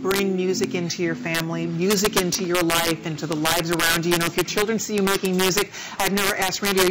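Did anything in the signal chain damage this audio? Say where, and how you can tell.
Yes. Wherever the sound gets loud, there are harsh, violent cracks, far sharper and more abrupt than ordinary clipping, scattered across the clip wherever the level peaks. This is integer overflow, most likely at a sample-format conversion or integer gain stage. The signal was driven about 5 dB past full scale, and instead of being limited, the roughly one percent of samples that exceeded the maximum wrapped around to the opposite sign. Each wrap is a full-range jump, which is why it cracks so much harder than clipping.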